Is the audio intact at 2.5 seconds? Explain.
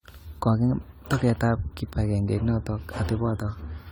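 No. Generation loss runs through the whole clip, including 2.5 seconds. The speech sounds swirly, smeared and hollow, with blurred attacks. This likely comes from repeated lossy re-encoding, around ten passes, fitting a 96 kbit/s AAC-LC chain. Each pass adds fresh quantisation noise and spectral holes. Nothing remains above 20.1 kHz.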